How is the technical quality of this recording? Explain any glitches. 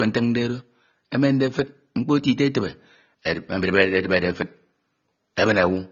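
The quality is limited by a single fault that runs through the whole speech recording: low-bitrate audio saved at a high bitrate, present from start to finish. There is nothing above 6.9 kHz, a hard ceiling that leaves the speech dull and lacking air. The likely cause is a file first squeezed through a low-bitrate codec, consistent with AAC-LC at around 24 kbit/s, then re-encoded as MP3 at a generous rate such as 256 kbit/s. The second pass keeps the earlier losses and cannot restore the missing top end.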